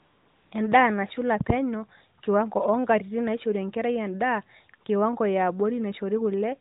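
From 0.0 to 0.52 s the opening is AMR comfort noise: the handset judged this stretch silent and sent no speech frames, so the receiver substituted a steady, smooth synthetic hiss. A spectrogram shows a flat, featureless band below 4 kHz, and the waveform shows even low-level fuzz that switches abruptly to real signal.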